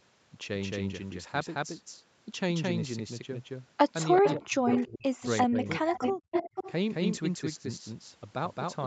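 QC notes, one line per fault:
throughout, doubled audio track: likely a second, slower capture path mixes in a full-band copy about as loud, trailing by roughly 200 ms, so everything sounds doubled.
4.2–4.68 s, 4.86–5.24 s, 5.46–6.18 s, speech suppressed in double talk: with both sides talking, the echo canceller likely ducked the talker, pushing dips as deep as roughly 35 dB.
4.25–4.38 s, 4.67–4.87 s, 5.23–5.27 s, 5.88–6.13 s, 6.31–6.72 s, echo leak: residual loudspeaker pickup likely escaped cancellation, returning delayed scraps at 383 ms, then 436 ms, roughly 5 to 20 dB below the speech.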